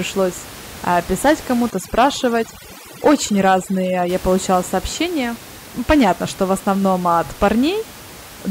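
From 1.70 to 4.09 s, after "а писать", overdone noise removal strips quiet bands. The background falls to twinkling near-silence until "получала сообщения".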